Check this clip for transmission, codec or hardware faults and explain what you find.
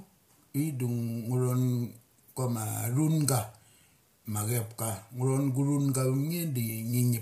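Yes, one codec fault runs through the whole speech clip. Throughout, the voice sounds rough and grainy, with noise filling gaps between harmonics; this is likely low-delay AAC compression, whose short frames blur pitch detail, fitting a bitrate near 32 kbps.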